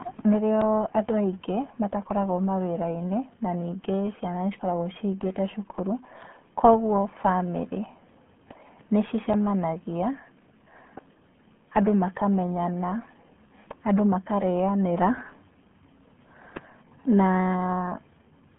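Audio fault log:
Throughout: RealAudio 14.4 codec. The speech sounds muffled, gargly and boxed-in, with nothing above about 3.8 kHz and a narrow telephone-like band around 150 Hz to 3.4 kHz. Heavy coding damage fits an 8 kbit/s dial-up-era RealAudio 1 stream discarding detail to fit the rate.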